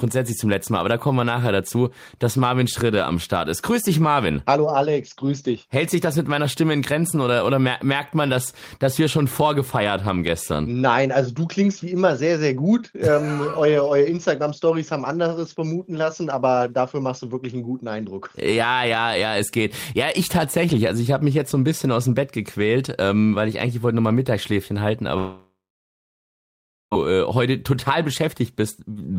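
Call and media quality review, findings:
Long network dropout, 25.17–26.93 s: receiver extends last sound as fading buzz, then 1.37 s silence; lost stretch skipped on resume. Likely network packet loss.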